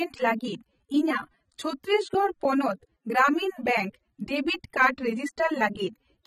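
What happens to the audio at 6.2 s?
AAC compression at 6.2 s, as throughout the speech: nothing sounds above 14.4 kHz, and the sound is dull, smeared and fizzy on sibilants. This is likely AAC-LC at a low bitrate, around 24 kbps, quantising spectral lines too coarsely and lowering the cut-off.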